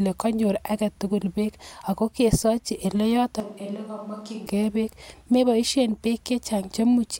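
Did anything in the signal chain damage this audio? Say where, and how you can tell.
Yes. Between 3.40 and 4.46 s the close microphone's feed drops out, likely a failed capture channel or a mix that fell back to a far microphone, so the recording switches to a distant microphone. Right after "beek ago kesochi ele" the speech turns abruptly roomy and hollow, loses low end and sits about 10 dB lower, with room noise rising to roughly 30 dB below the speech. It snaps back just as suddenly before "ge beek meboishen beek".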